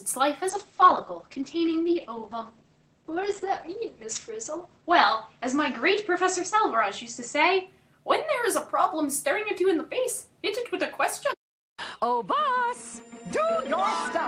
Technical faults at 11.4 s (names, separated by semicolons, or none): none